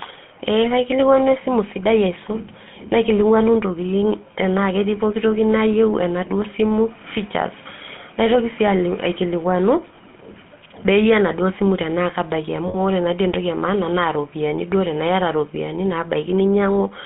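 It's a speech clip carried over the GSM full-rate codec the whole way. The band is confined to roughly 150 Hz to 3.4 kHz, and there's a plainly audible buzzy, gravelly roughness from the pulse-driven vocal-tract model, which fits 13 kbps full-rate GSM. There are also lost GSM frames. Around 9.96 to 9.99 s there's a brief metallic hold, which fits a single 20 ms frame being patched by repeating the last good one. Right after "enaduo simu tenaake abaiki", from 12.68 to 12.77 s, a longer rough ring holds, consistent with about three consecutive frames being concealed.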